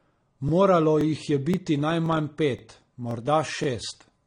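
It's a speech clip, and it's got two problems. The first runs the whole way through: the sound is dull and a bit smeared, with a fizzy, warbly edge on the sibilants and nothing above about 9.7 kHz. That's likely AAC compression, AAC-LC at a low bitrate, which fits something around 32 kbps. The encoder has pulled the cut-off down and thinned out the spectrum to save bits. The second is overlapping chunks. There's a small stutter at 0.49, 1.01, 1.54, 2.06, 2.59, 3.11 and 3.64 s, so roughly every half second, including one just before "jih je" and another right after it. At each join about 25 ms of audio plays twice because the next chunk starts before the last one has finished, and that repeated slice gives you the regular little click-stutter.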